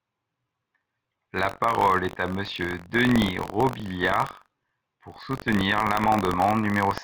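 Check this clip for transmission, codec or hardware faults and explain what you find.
There's one fault here, buffer tearing, and it runs the whole way through the speech. The program filling the ring buffer and the hardware reading it have drifted into each other, so every period carries a small slice of stale audio, around 70 ms old, spliced in with hard edges on both sides. You hear it as a steady robotic rattle at about 46.9 Hz, present whenever there's signal, which fits a 1024-sample buffer.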